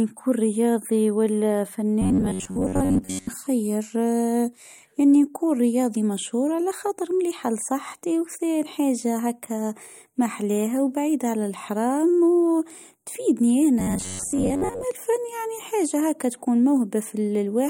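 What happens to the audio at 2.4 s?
Audio data is likely arriving too seldom here, so the playback software keeps looping a very short stretch of the last buffer while the incoming speech is skipped. From 2.02 to 3.30 s, just after "نكون رياضي ولا", this produces robotic sound from repeated short buffers: most of the sound is recycled, and the loop imposes a fixed buzz near 94 Hz, which fits a repeat length of about 11 ms. The speech becomes a stiff, metallic drone that only loosely tracks the words.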